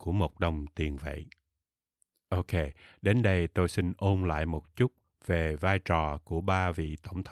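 Nothing in this speech recording stands out as a technical fault, so there's no problem to point to at any moment in it.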